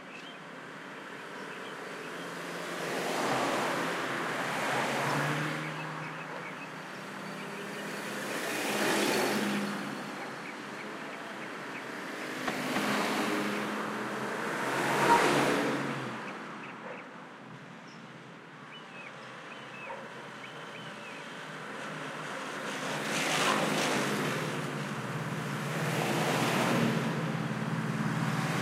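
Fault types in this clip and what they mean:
No fault types are present in this clip.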